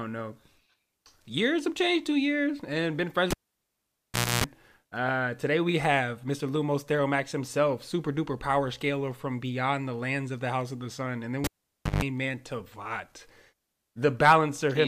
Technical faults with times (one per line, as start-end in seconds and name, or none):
3.31-4.44 cable pulled and plugged in
11.44-12.04 cable pulled and plugged in